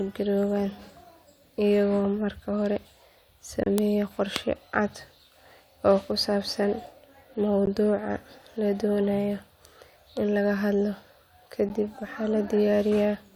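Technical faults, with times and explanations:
3.63–3.66 s, 7.66 s and 11.69 s, gap between stream segments. The speech stops dead three times, for 28 ms, 15 ms and 11 ms. The holes fall about 4 s apart, matching 4-second stream segments. Each new segment starts slightly later than the previous one ends. The player fills that timing gap with silence. Its hard edges make the cut sound abrupt. No audio is lost. The speech simply pauses and then continues.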